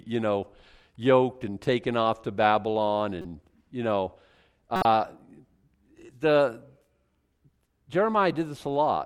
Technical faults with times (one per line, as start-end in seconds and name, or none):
3.21-3.25 corrupt frame decoded
4.76-4.85 corrupt frame decoded